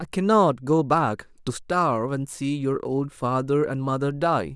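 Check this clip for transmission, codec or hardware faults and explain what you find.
Nothing here to flag; the speech comes across steady and intact, with no transmission, codec or hardware trouble I can hear.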